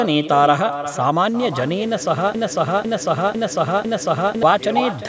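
Throughout the speech, echo with no canceller trails every phrase by around 0.4 s, about 11 dB quieter and thinner, showing as faint duplicated formant bands shifted right on the spectrogram. From 2.35 to 4.43 s, a broken-record loop repeats one 0.5 s fragment four times back to back, likely from a stalled stream, appearing as identical, regularly tiled waveform blocks.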